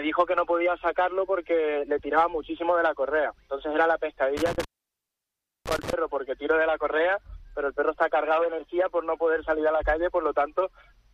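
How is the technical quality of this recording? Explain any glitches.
One glitch stands out. Intermittent contact, 4.37 to 5.93 s: a loose cable or plug opens for about 1.01 s, cutting the sound to faint hiss, with crackle at the edges.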